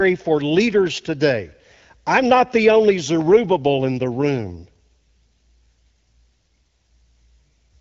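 No faults present: the speech goes through an AMR wideband (HD Voice) link at 12.65 kbit/s, carrying the light coding texture of that rate and no content above 7.5 kHz.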